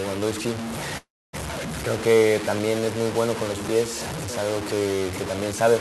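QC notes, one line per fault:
Throughout: low bit depth without dither. The sound sits on a coarse grainy distortion that tracks the signal, rising and falling with it rather than staying steady. Quiet passages grow rougher, and the softest moments sputter between two levels or drop to silence. The noise runs at about 10 dB below the signal, which fits a likely 4-bit truncation with no dither, so the rounding error stays locked to the waveform instead of spreading out as neutral hiss.
0.97–1.35 s: call audio freeze. The sound halts and the last moment carries on briefly as a fading buzz before going silent for about 260 ms, in a fill that lasts 358 ms in all. It then resumes exactly where it stopped, with nothing skipped, so everything after this point runs 358 ms late. This is likely a jitter buffer running dry while packets were delayed, with the receiver padding the wait. The audio passed through an Opus call path, which caps the top end near 12 kHz.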